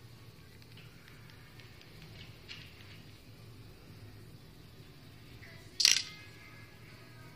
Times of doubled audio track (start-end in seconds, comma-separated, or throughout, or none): none